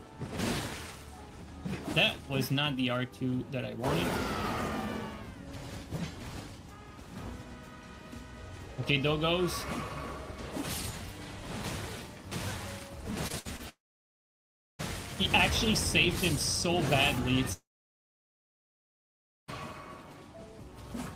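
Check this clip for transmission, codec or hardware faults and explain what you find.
There are transmission faults, all in the back half of the clip, where the network delivery breaks down.

From 13.27 to 13.61 s there's repeated packet loss with a robotic sound. Four short holes, the longest about 59 ms, get patched by stretching the last bit of audio, so about a third of that stretch is filler. It comes out choppy and mechanical.

Right after, from 13.69 to 14.81 s, the sound cuts out in a long network dropout. The likely cause is that no audio arrived for over a second. A brief smeared tail leads into roughly 1.03 s of silence, then the sound resumes with that chunk missing.

The same long network dropout happens again from 17.53 to 19.50 s. It's a brief continuation of the last sound, then about 1.86 s of silence. When the audio comes back, the lost stretch simply isn't there.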